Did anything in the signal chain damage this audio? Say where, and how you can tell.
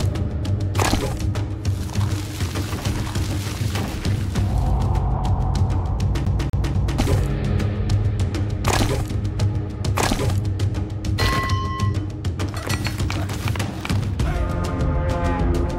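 Yes. At playback, a CD stuck on one turn: a scratch keeps throwing the laser back one track. From 6.25 to 6.99 s, the same 244 ms of sound repeats three times, each pass broken by a short mute, giving the fast, even stutter of a skipping disc.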